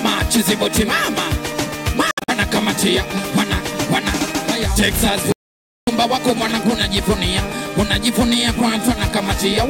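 At 2.11 s the sound starts breaking up, and it recovers by 2.30 s. This is a Bluetooth dropout. The likely cause is audio packets failing to reach the headphones in time, so they were discarded. Several short holes are scattered across roughly 170 ms, adding up to 128 ms of missing audio. The longest single gap lasts 64 ms. The pattern fits a handful of lost packets of about 21 ms each. Each hole has hard edges or a brief fade, and the sound resumes further along, as if it had kept playing.

From 5.32 s to 5.87 s there is an audio dropout to silence. For about 0.55 s the output falls to silence, with no background tone at all. The sound cuts off mid-flow and returns just as abruptly. The likely cause is that the input was briefly lost, through a broken link or a stray mute, while recording continued writing silence. Whatever sounded during that gap is gone.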